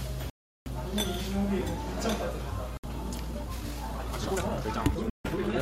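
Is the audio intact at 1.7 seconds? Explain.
Yes, at 1.7 seconds the sound is intact, with no dropout, click, distortion or other fault at that moment.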